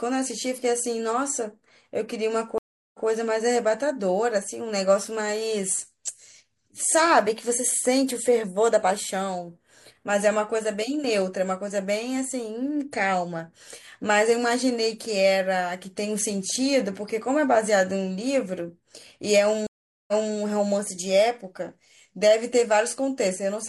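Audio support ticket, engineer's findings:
Dropout then replay at 2.58–3.07 s (about 360 ms silent, resumes 128 ms back) and 19.67–20.34 s (about 413 ms silent, resumes 256 ms back). Stream reconnect: connection dropped, player reconnected mid-stream with fresh decoder, server resent a short burst, so speech repeats.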